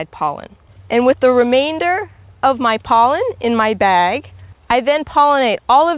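No technical faults are audible.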